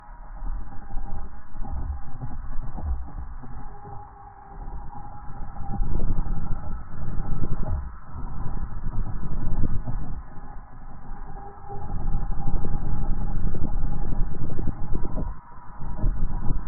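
A recording of sounds, switching abruptly at 4.65 s to an adaptive stream at a lower bitrate. With no gap, codec artefacts rise through the end, which fits Opus falling from 64 to 12 kbit/s.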